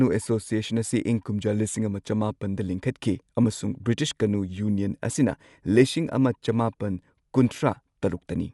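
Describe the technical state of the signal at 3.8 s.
At 3.8 s the speech carries the same damage heard across the whole clip, most likely from Dolby Digital compression at a low rate, consistent with about 64 kbps. The encoder has narrowed the band, so nothing sits above 11.4 kHz, and coefficients starved of bits are replaced with dither noise, giving a dull, rough, fluttering texture around voiced tones. A spectrogram shows a hard ceiling at 11.4 kHz and grainy, blotchy patches between harmonics.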